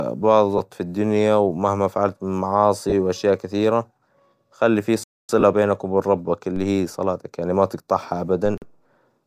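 A speech clip with three kinds of fault. Brief noisy smears at 0.58 s, at 2.90 to 2.93 s just before "وأشياء كثيرة", and at 5.40 to 5.43 s before "بينك وبين ربك" are lost LE Audio frames. One, two and three 10 ms frames went missing, and the LC3 decoder, likely behind this light, slightly grainy Bluetooth stream, filled each gap with the previous spectrum under random signs. Abrupt holes at 5.04 to 5.29 s, after "خلي في", and at 8.58 to 8.62 s are blocks of digital silence lasting 256 ms and 43 ms. The audio drops hard to silence and returns with no fade. The first hole is heard as a clear gap and the second as a short hole. Low thumps at 6.56 s and 8.46 s are DC steps. In each, the waveform's zero line jumps suddenly and then drifts back at a rate set by a high-pass around 2 Hz, while the speech carries on unchanged.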